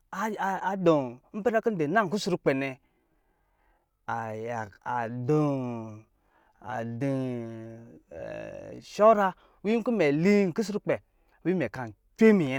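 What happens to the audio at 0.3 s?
Nothing goes wrong at 0.3 s; the speech runs on intact through that moment, with no break, click or change in level or tone.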